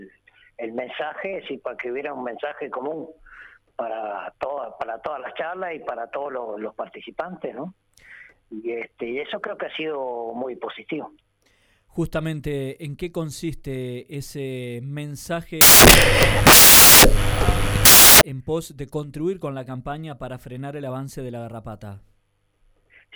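From 15.61 s to 18.21 s the decoder builds its samples from the wrong bytes: it misreads how each sample's bytes fit together, whether shifted by one byte, taken in reverse order or read at the wrong alignment. The rapidly fluctuating low-order bits then land in the most significant positions of every value. For those 2.6 seconds the audio is replaced by loud, harsh broadband noise.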